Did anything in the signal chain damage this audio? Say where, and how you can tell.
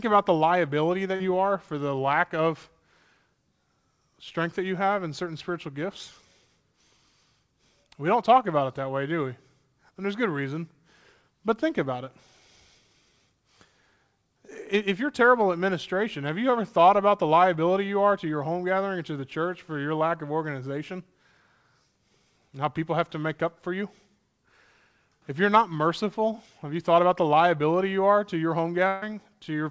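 Yes, the damage comes from the network stage of a call. The audio stops above 8 kHz, which fits a G.722 call codec at 64 kbps.

Just after "about the liability", from 1.16 to 1.22 s, there is a brief smear before "you are for the". This is short concealed packet loss. About 40 ms never arrived in time, and the receiver covered 38 ms by extending the preceding sound before blending back.

After "you are to your", from 28.88 to 29.04 s, the sound is carried on and fades, then jumps ahead. This is a burst of packet loss. About 140 ms went missing, and the receiver filled the whole 140 ms gap by continuing the last sound at falling level, with no silence left.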